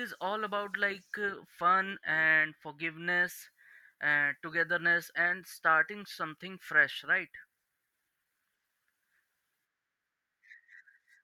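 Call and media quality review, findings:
No findings: call and media quality review turned up no faults in this clip.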